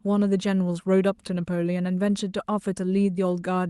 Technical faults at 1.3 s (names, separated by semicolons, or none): none